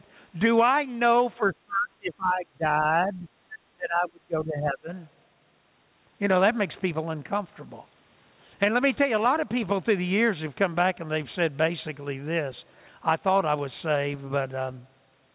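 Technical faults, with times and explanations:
1.37–3.28 s and 3.74–4.9 s, speech suppressed in double talk: the speech drops by up to about 25 dB, likely because an echo canceller ducked it during overlapping talk. The waveform envelope sinks, and the spectrogram fades below the 4 kHz ceiling of the G.711 call path.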